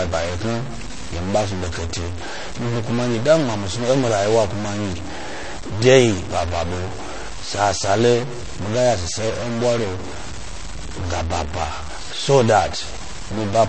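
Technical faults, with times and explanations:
Throughout: distortion rides on the speech and fills the pauses with noise. The likely cause is a stuck bit, shifting about half the samples by that bit's weight. On a waveform, silences show noise instead of flat silence.
Throughout: MP3 compression is plainly audible, with watery, swirly speech, smeared consonant onsets and metallic chirps on s sounds. Nothing remains above about 8.3 kHz, which fits a likely low bitrate around 32 kbps. A spectrogram shows a hard ceiling and flickering holes below it.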